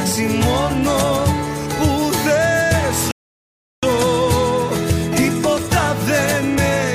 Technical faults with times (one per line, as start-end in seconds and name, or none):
3.11-3.83 rebuffering stall